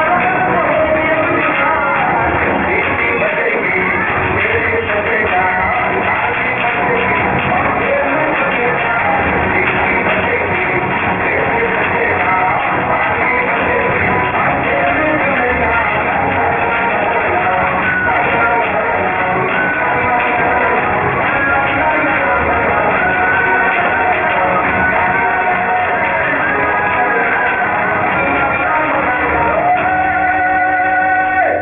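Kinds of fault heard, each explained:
Aliasing: energy above 3 kHz folds back below it, fitting a drop to 6 kHz sampling; gritty false tones run nearly as loud as the sound.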